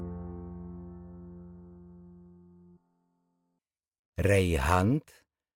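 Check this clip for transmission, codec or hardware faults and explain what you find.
One fault here: an adaptive stream starting at a low bitrate. For the first 4.0 s the top end is thin and partly synthetic, with stronger codec smearing, which fits a very low-rate HE-AAC rendition. Once the player has measured the connection, it switches up to what sounds like AAC-LC at 96 kbit/s. Quality jumps cleanly, with no gap.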